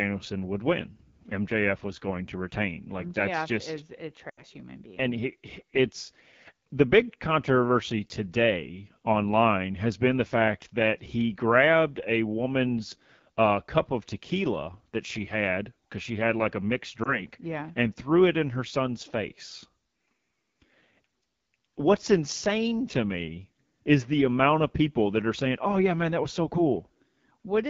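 Speech that sounds rough and raspy throughout, which points to the AMR wideband (HD Voice) codec running at a low rate around 8.85 kbit/s. From 4.30 to 4.43 s, between "that's just is a" and "human being", the sound drops to near silence and returns weak: roughly 80 ms of lost AMR speech frames, concealed by repeating decaying parameters. Between "had like a mixed" and "yeah and threw it", at 17.03 to 17.22 s, a brief warble marks a single 20 ms lost frame.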